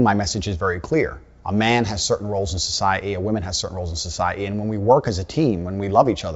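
Bit errors on an ADPCM link break into this speech clip from 0.30 to 0.39 s as a short cluster of pops and rough, gritty bursts with quick jumps in level. Each flipped bit upsets the decoder's step size and predictor, so the damage smears over several milliseconds instead of staying a single click. The extent suggests a handful of hit frames at a low error rate, well under one percent, on a wideband link that sounds like G.722 at its full 64 kbit/s.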